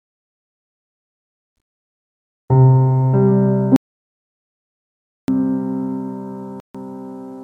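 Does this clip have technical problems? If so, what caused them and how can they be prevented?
Yes. From 3.76 s to 5.28 s the sound stops dead for about 1.52 s and then resumes mid-flow, with no room tone in the gap. This is most likely an audio dropout to silence: the input was lost, perhaps through a loose cable or a brief mute, while the recorder kept writing zeros. On a waveform it shows as a flat line, and on a spectrogram as a dark band with hard vertical edges at both ends. To prevent it, secure connections and check input monitoring during recording.

At 6.60 s the sound cuts to silence again for 145 ms and then picks up. This short gap is likely a Bluetooth stall, where interference delayed packets, the headphones' buffer ran empty, and playback paused until the resent data arrived. It appears as a narrow flat segment in the waveform and a thin black vertical strip on the spectrogram, with the sound continuing on the far side. 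To prevent it, keep the devices close with a clear line of sight and away from crowded 2.4 GHz sources, or use a wired connection.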